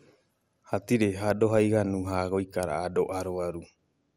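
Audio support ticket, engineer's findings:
Likely MP2 compression throughout; a bit budget fitting 80 kbps starves sub-bands, and upper bands flicker off. Speech dull, gurgling, granular; nothing above 15.8 kHz.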